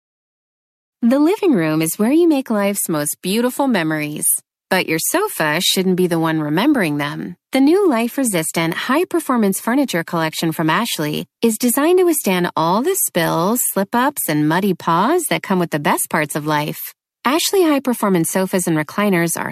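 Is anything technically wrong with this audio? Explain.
No, nothing technically wrong can be heard in this speech recording. There is no point in it where a fault shows up.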